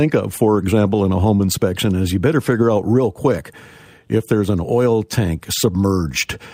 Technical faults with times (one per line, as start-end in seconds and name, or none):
1.35-1.41 short concealed packet loss